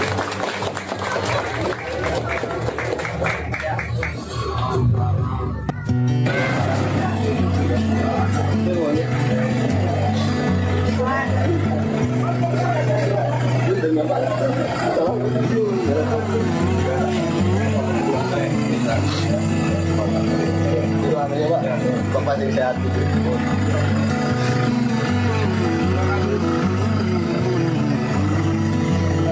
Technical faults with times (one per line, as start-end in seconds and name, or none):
0.00-29.31 gain pumping